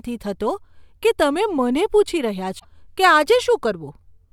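Damaged data in the compressed stream breaks the speech from 2.56 to 2.65 s, just after "પૂછી રહ્યા". Corrupted bytes there leave the decoder misreading frames and losing sync until it locks onto a later frame header, so roughly 90 ms turn into a short, harsh blip.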